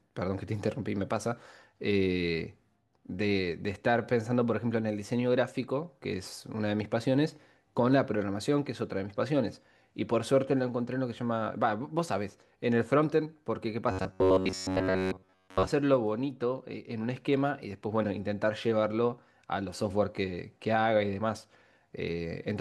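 Speech, with a stretch of robotic sound from repeated short buffers between 13.91 and 15.70 s. The voice there collapses into a stiff, metallic buzz at 93.8 Hz that loosely tracks the words, likely because fresh audio arrived too slowly and the player looped a segment of about 10.7 ms for roughly 70 percent of that span. A spectrogram would show rigid, evenly spaced harmonic lines at multiples of 93.8 Hz, and the waveform would show identical cycles repeating every 10.7 ms.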